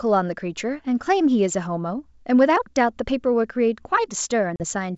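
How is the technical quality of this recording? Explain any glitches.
One glitch stands out, near the end of the speech at 4.56 to 4.64 s, heard through a wideband G.722 path that carries the speech cleanly up to about 7 kHz. It is packet loss on an ADPCM call. About 40 ms of audio, a couple of packets' worth, drops out as an abrupt, hard-edged silence. ADPCM decoding depends on a predictor and step size that track the sender continuously, so the gap pushes the receiving decoder out of step. When sound resumes it comes back slightly distorted until the decoder re-converges over the next few tens of milliseconds.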